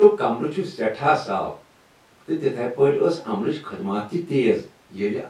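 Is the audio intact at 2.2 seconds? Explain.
Yes, at 2.2 seconds the speech plays through intact, with no dropout, click, distortion or other fault to be heard at that moment.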